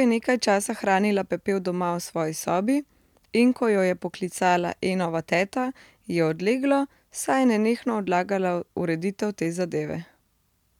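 No technical faults can be heard anywhere in the recording. There is nothing to place on a timeline.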